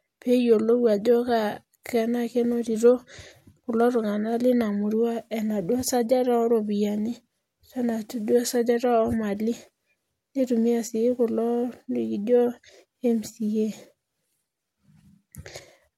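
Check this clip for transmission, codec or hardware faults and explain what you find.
No faults detected.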